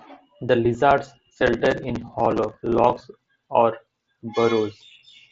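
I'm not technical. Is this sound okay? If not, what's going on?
Yes, no faults: the speech comes through a Bluetooth headset connection using the mSBC codec, which carries sound up to about 8 kHz, and that link is working as it should.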